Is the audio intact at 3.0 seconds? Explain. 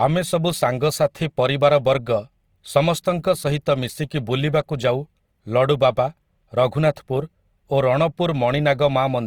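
No, the speech at 3.0 s carries the grainy, roughened texture running through the whole clip, likely Opus compression at around 24 kbps, with sparse bands filled by folded or noise content.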